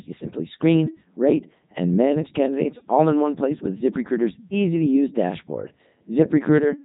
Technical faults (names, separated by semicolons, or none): Codec 2 vocoder